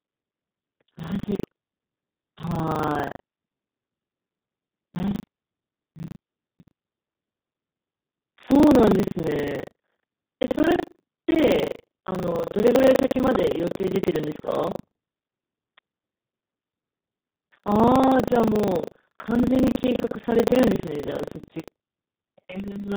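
Speech runs through heavy Speex codec damage for the whole clip. The voice is hoarse, noisy and edging toward robotic, the sound of a CELP coder starved of excitation bits, which fits a very low setting around 4 kbps. On a spectrogram the harmonic striations are smeared into grainy, noise-filled bands rather than clean pitch lines.

Buffer tearing runs through the clip on top of that. It is a steady rattling buzz at 25 Hz that appears only while sound is present. The writer and reader of the playback ring buffer have slipped, so every 40 ms period contains a stretch, about a fifth of it, replayed from roughly 70 ms earlier, with hard joins at both edges. In the waveform this shows as abrupt discontinuities recurring every 40 ms. On a spectrogram it appears as a comb of thin vertical lines at that spacing, visible only over active speech.

Finally, an electrical switching spike lands at 12.39 s and another at 15.78 s. 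Each is a sharp snap laid over the audio, very likely an arc from a nearby switch or discharge coupling into the line. The waveform shows a near-instant spike standing clear of the surrounding signal, and the spectrogram shows a full-height vertical stripe at each time.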